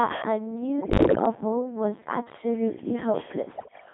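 A speech clip passed through the Codec 2 vocoder. It sounds robotic and buzzy throughout, confined to about 150 Hz to 3.5 kHz, which fits a 2.4 kbit/s mode. Bit errors on digital voice radio strike from 0.80 to 1.26 s and 3.56 to 3.86 s. Flipped bits corrupt whole frames there, so pitch, level and tone jump into warbling gibberish. The first burst is heavier, consistent with around one bit in ten being wrong.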